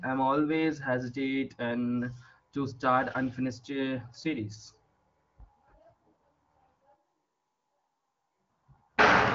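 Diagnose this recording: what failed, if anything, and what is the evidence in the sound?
From 6.95 s to 8.50 s the speech abruptly turns roomy and hollow, bass-light and about 10 dB quieter, with room noise up near 30 dB below the speech. That's a likely switch to a distant microphone at capture, with the close mic dropping out before it snaps back.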